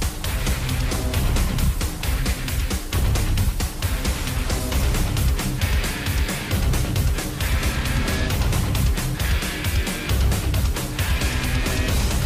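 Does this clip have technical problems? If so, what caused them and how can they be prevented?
No, nothing stood out as a technical problem on listening, so there is no cause to trace and nothing that needs preventing.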